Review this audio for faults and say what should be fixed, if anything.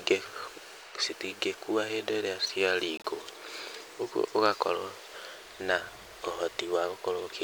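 A corrupt frame muted gap cuts the speech from 2.97 to 3.06 s. About 80 ms of abrupt silence points to a few codec frames that the decoder rejected after bit damage and the player replaced with nothing. This differs from packet loss that shortens the audio, because timing is preserved and the speech resumes exactly in place. Prevent it with checksummed, retransmitted or error-resilient transport so damaged frames are recovered before decoding.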